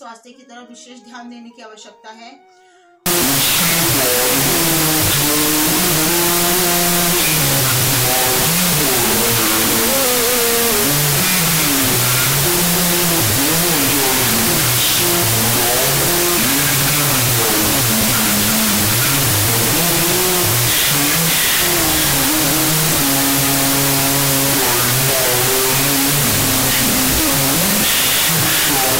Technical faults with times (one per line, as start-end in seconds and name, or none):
3.06-29.00 wrong sample width